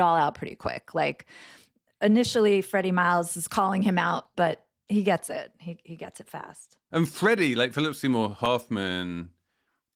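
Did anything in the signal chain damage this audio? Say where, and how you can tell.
Yes. Dropped samples, likely at the driver or buffer stage, cause single sharp clicks at 1.12 s after "out pretty quick", 5.27 s after "out but he gets", 6.58 s after "he gets it", and 8.46 s. Each loses a fraction of a millisecond, so the waveform jumps without losing any sound.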